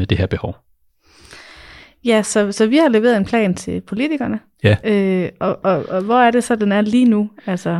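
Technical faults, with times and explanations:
No technical faults can be heard anywhere in the speech recording.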